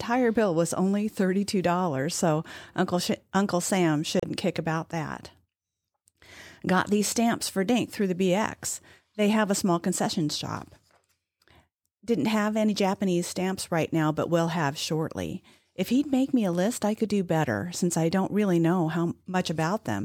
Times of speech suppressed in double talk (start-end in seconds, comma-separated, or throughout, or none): none